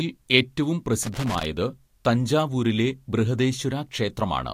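Loose connector crackle breaks into this speech clip from 1.03 to 1.45 s as an irregular burst of scratching. A worn or dirty contact in the signal path is making and breaking as it shifts, chopping the audio on and off for that moment.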